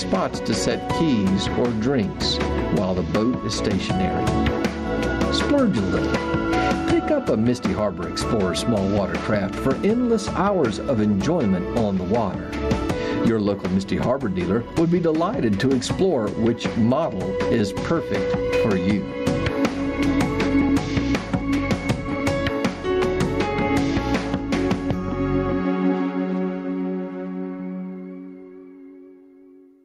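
Gain pumping runs throughout the clip: the gain swings by roughly 15 dB under each loud sound, leaving loud and soft passages squashed close together, likely from input gain set far too high and a fast limiter repeatedly clamping it.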